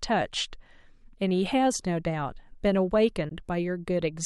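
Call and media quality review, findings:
Bluetooth dropout, 3.29–3.31 s, speech. A single packet to the headphones likely arrived late on the wireless link and was discarded. Output cuts to silence, about 15 ms of audio missing, fits one lost frame. Speech resumes further along, as though playback continued through the gap.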